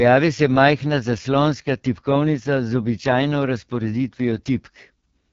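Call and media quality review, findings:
AMR wideband (HD Voice) codec, whole clip: rough, raspy speech, consistent with the lowest 6.6 kbit/s mode. Spectrogram shows a hard ceiling near 7.5 kHz and a smeared, noise-filled top band.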